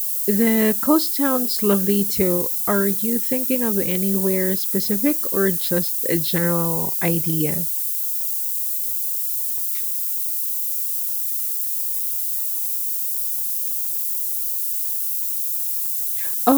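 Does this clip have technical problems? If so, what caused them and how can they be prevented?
Yes. Across the whole speech clip there's low bit depth with noise shaping: a steady, thin hiss that climbs sharply toward the top of the band. It sounds like about 5 bits, and the rounding error has been fed back and pushed up into the high frequencies, so the hiss ends up roughly as loud as the speech itself. To prevent it, keep the signal at 16 bits or more all the way to the final export.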